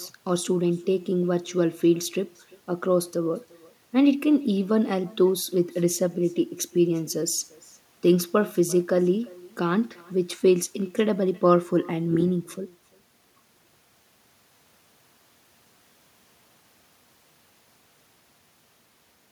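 Throughout this speech recording, every phrase is trailed by a faint, thin copy arriving roughly a third of a second later, about 26 dB below the talker. This is echo with no canceller: the far end's loudspeaker feeds its microphone, and that pickup returns uncancelled after the network round trip.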